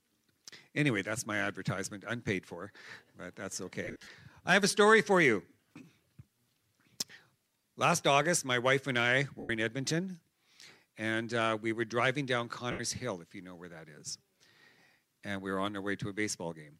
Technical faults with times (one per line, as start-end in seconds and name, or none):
3.84-4.07 lost LE Audio frames
9.39-9.50 lost LE Audio frames
12.71-12.80 lost LE Audio frames